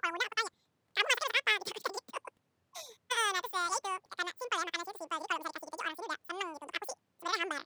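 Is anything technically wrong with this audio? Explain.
Yes. The whole clip is audio read two samples at a time, which gives double speed. The speech runs at twice its proper rate and sits 12 semitones higher, a full octave up. The reader treated each pair of samples as a single frame, as if the data were two-channel or twice as wide per sample. Every second of sound therefore plays in half a second.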